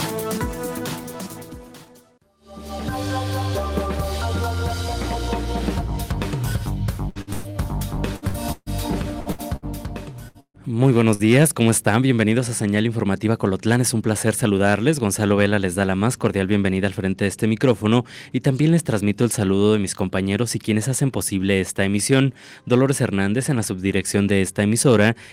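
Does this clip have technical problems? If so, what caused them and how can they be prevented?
Yes. From 7.09 to 9.65 s there is repeated packet loss, heard as choppy sound. Eleven gaps fall in this stretch. The longest lasts 142 ms. Each hole is patched by stretching out the last sound, and the next hole arrives soon after. About 28% of the stretch is filled in this way, and about 540 ms of real audio is missing. A more stable network path, or forward error correction with redundant packets, would prevent this.

Three bursts of packet loss follow, at 10.28 to 10.37 s, 10.40 to 10.57 s and 11.14 to 11.22 s. In each, the receiver carries the last sound forward and fades it, so it turns into a held buzz or a dimming hiss. Then the audio jumps ahead. The first and third bursts each lose 60 ms. The middle one loses 120 ms and includes 60 ms of silence. The delay also shifts there, by 17 ms. 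Reducing congestion and adding packet redundancy would prevent these bursts.

From 13.27 to 14.51 s comes a jitter buffer speed-up. The buffer held more audio than it aims for, likely after delayed packets arrived together. To shrink it, the receiver cut out many short pieces, each one to a few pitch periods long. Around a tenth of a second was removed in total. The sound runs about 7% fast at unchanged pitch and feels hurried. Steadier packet delivery would prevent this, and so would a buffer that drains more gently.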